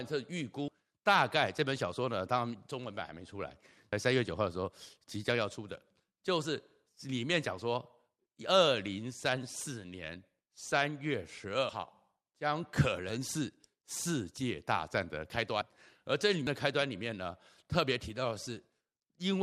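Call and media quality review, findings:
Skip at 16.47 s in speech, with an abrupt jump forward and no gap. About a tenth of a second of audio missing. Likely a dropped buffer (overrun): capture samples were overwritten before being read. Surviving audio on both sides spliced directly.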